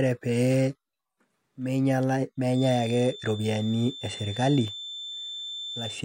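From 2.48 s to the end, a feedback whistle sits at 3.5 kHz well below the speech, likely a speaker-to-microphone loop held at its limit; a spectrogram shows a thin steady horizontal line.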